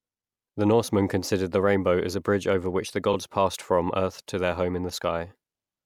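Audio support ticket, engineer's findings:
Repeated frames, 3.12–3.15 s, between "bridge over which the" and "passed from earth to". Brief stutter; 26.1 ms block replayed once, adding 26.1 ms. Likely compressed frame resent in transport. Exact duplicate, no silence, unlike dropout.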